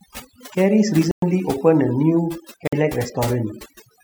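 Right from the start the speech carries overdone noise removal. The noise reducer was pushed too hard, so any frequency band sitting near its idea of the noise floor gets pulled way down or shut off, and the softer parts of the voice get dragged under along with it. What's left is a background that's dropped down but dotted with little twinkly specks.

At 1.11 s the audio drops to silence for about 111 ms, coming back at 1.23 s, and it happens again from 2.67 s to 2.73 s, a shorter gap of about 51 ms. These sound like a Bluetooth stall, most likely interference delaying packets until the headphone buffer ran empty, so playback simply paused until the resent data showed up. Each time it's a clean cut to nothing, then the sound carries on.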